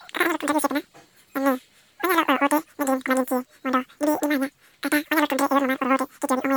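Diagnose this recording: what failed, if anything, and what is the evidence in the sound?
A wrong sample rate at the playback stage runs through the whole clip. The speech is about 2.76 times too fast and pitched up by roughly 17.6 semitones, nearly an octave and a half, so it comes out squeaky and rushed from start to finish. Because speed and pitch shift together by the same ratio, the samples are being clocked out faster than they were captured, with no rate conversion. The ratio fits 16 kHz material played at 44.1 kHz.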